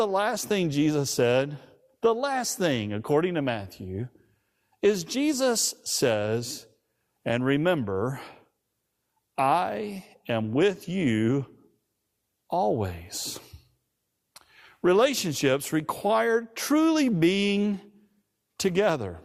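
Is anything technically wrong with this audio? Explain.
No, nothing technically wrong is audible in this recording.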